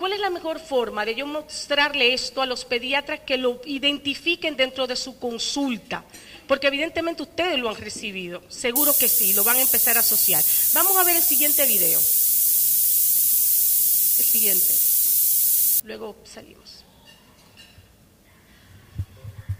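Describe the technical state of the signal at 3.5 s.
At 3.5 s the signal is intact, with no dropout, distortion, glitch or other technical fault audible at that point.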